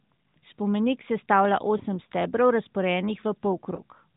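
At about 1.78 s and again around 3.76 s there's a lost AMR speech frame, one dropped 20 ms frame each time. The decoder fills the gap by repeating the last good pitch and vocal tract settings at reduced gain, so you hear a quick dip or warble in the speech.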